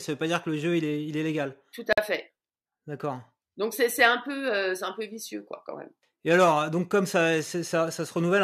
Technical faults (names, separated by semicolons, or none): gap at a join of encoded pieces